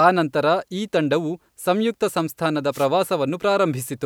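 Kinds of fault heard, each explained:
Wireless microphone noise hit: the radio link of an analogue FM microphone fades as reflected signals cancel, letting receiver noise surge over the speech. Here a brief burst of static swish lasts about 0.15 s, from 2.72 to 2.87 s, right after "ಈ ತಂಡವು ಸಂಯುಕ್ತ ಸಂಸ್ಥಾನದ". On a spectrogram it appears as a broadband noise patch smearing across the speech harmonics.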